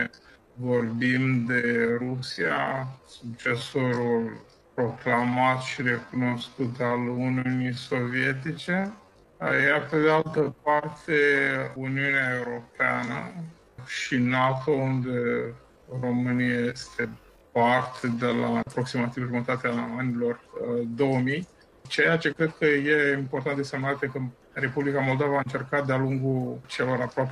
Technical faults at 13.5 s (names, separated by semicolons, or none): time-stretched section